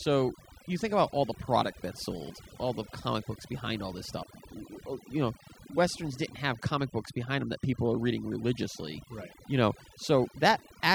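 Overdone noise removal runs through the whole speech clip. A noise reduction stage was set too strong. It cuts individual frequency bands down or out whenever they sit near its noise estimate. Quiet parts of the voice vanish with them. Pauses fall to near silence with twinkling specks.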